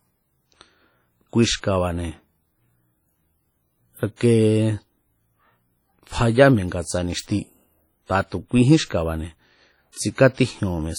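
Speech throughout, with heavy transform-codec damage: a washy, ringing texture and hiss that pumps with the voice, weak detail dropped, though content extends to about 20.1 kHz. This is likely WMA compression, consistent with a low bitrate around 32 kbps.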